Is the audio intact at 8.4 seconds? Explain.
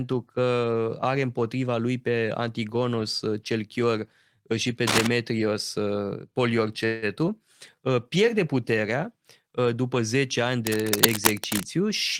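Yes, the speech at 8.4 s plays through cleanly, with no dropout, click, distortion or other audible fault at that moment.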